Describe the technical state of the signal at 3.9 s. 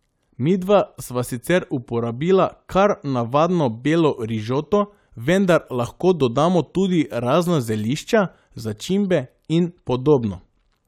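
At 3.9 s the speech signal is intact, with no audible dropout, distortion, or other technical fault at that point.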